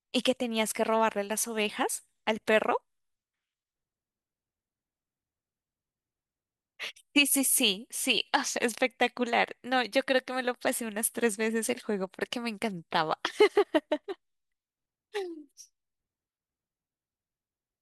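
Speech recording with no technical faults to point to. Nothing in it calls for a time or a cause.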